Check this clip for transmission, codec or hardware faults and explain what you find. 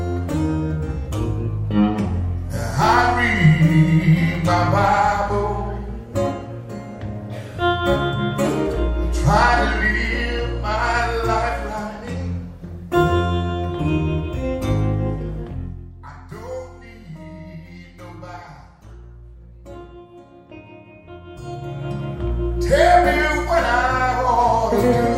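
One fault is present: zipper noise, from 21.25 to 21.91 s. A level change of about 20 dB is applied in coarse, unsmoothed steps, roughly 400 a second. Each step leaves a tiny click. Together they form a fine ticking that rides on the sound while the level moves.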